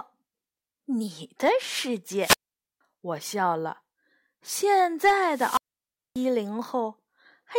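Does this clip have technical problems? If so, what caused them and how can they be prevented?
Yes. Two wireless microphone squelch dropouts occur, at 2.19–2.81 s and 5.25–6.27 s. Each time the fading radio signal lets hiss rise until the receiver's squelch mutes the output for 475 ms and then 587 ms. That rising static before the hole, rather than a clean digital cut, marks it. Keeping the transmitter in line of sight and close to the receiver, with good antenna placement, prevents it.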